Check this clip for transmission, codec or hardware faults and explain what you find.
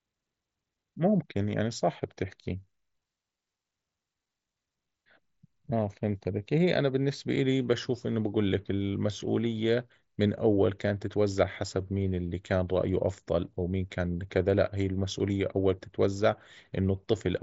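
Nothing stood out as a fault on listening to this speech clip.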